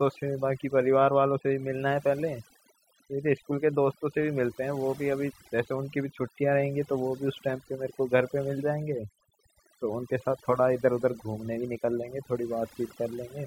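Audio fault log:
throughout, overdone noise removal: the noise reduction was set too aggressively, so frequency bands sitting near its noise estimate are cut almost entirely, taking the quieter parts of the speech with them. The background drops and breaks up into twinkling specks.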